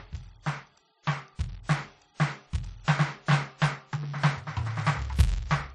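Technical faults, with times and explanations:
throughout, filter restarted on every block: a steady 200 Hz buzz rides under the music and swells with its level, consistent with a filter resetting its state every 5 ms.
throughout, transcoding between lossy codecs: nothing above 12.2 kHz, with the different codecs' artefacts heard together, likely from a low-rate MP3 re-encoded to WMA 1 near 48 kbit/s.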